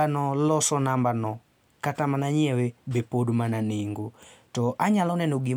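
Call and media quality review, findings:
No faults found in this speech recording. Nothing audible needs tracing to a component or mechanism.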